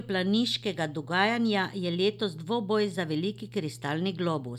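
From the first moment to the last there's mains hum under the speech: a steady low drone sitting at 60 Hz, with a few low harmonics stacked above it. It's well below the talking. That's the power line leaking into the signal, most likely through a ground loop or a transformer sitting too close to the cabling or gear.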